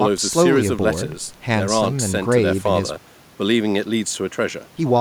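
No technical faults can be heard in this speech recording. There is nothing that needs a time stamp or an explanation.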